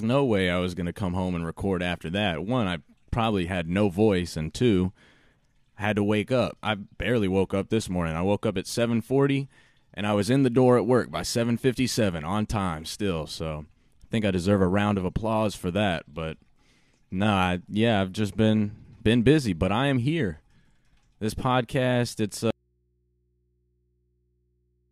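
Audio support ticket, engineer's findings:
Audio dropout to a faint residue, 22.51 s to end, after "podcast it's". Abrupt cut to low mains hum, likely open input; no fade, unlike a pause.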